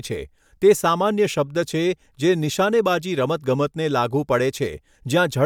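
Listening through the speech, nothing stood out as a technical fault at any point.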